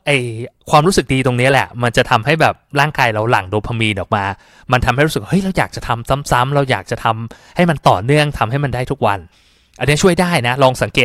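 Hard clipping from 0.74 to 3.38 s and again from 7.60 to 8.23 s: the speech is driven about 7 dB, then about 6 dB, beyond what a stage can pass, so peaks are sliced flat, adding high harmonics heard as crackle on peaks.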